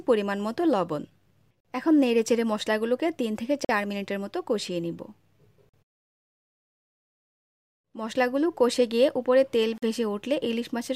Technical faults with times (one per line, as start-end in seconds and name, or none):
1.60-1.65 gap between chunks
3.65-3.69 gap between chunks
5.69-5.74 gap between chunks
9.78-9.82 gap between chunks